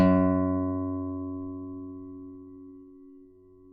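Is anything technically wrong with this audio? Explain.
Yes, there are two timing faults.

From 1.09 to 1.67 s there are repeated stalls (stutter). Packets arrived late or slower than playback consumed them, so the jitter buffer ran dry four times. Each time, the receiver extended the last sound to cover the hole. Together these patches add 44 ms, the longest about 11 ms, and cover roughly 8% of that stretch. Nothing is lost, but the sound catches and drags in short hiccups.

From 2.53 to 3.59 s there is a jitter buffer slow-down. With its reserve low, or after raising its target delay, the receiver rebuilt the buffer by repeating single pitch periods and fragments of quiet passages many times over. This adds 76 ms and runs the audio at 94% speed. The pitch stays unchanged, but the sound is audibly stretched and drawn out.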